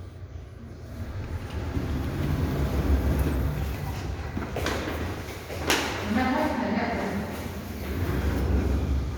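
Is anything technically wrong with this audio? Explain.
No, nothing is technically wrong with this audio.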